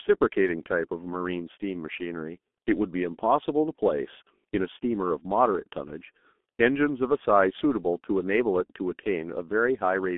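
From start to finish, the speech has been through the G.723.1 codec. Nothing is left below 200 Hz or above 3.5 kHz. The coarse 30 ms frames and heavy damage, which fit a bitrate near 6.3 kbit/s, make it muffled and hoarse, with smeared consonants.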